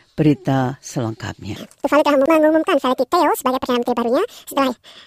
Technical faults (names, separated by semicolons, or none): section at the wrong speed